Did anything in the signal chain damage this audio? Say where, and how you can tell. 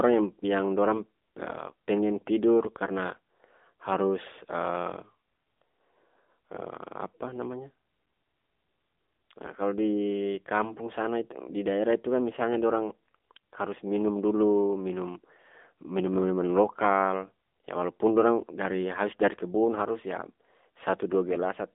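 Yes. Throughout, the speech passes through the AMR narrowband mobile codec: a 250 Hz to 3.6 kHz line band, nothing above 3.8 kHz, and a plainly buzzy, synthetic timbre, fitting a low mode near 8 kbps. Simple telephone filtering would narrow the band without that pulse-driven buzz.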